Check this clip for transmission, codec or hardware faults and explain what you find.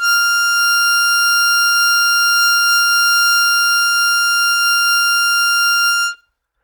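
Listening to the music in this clip, nothing stood out as a fault.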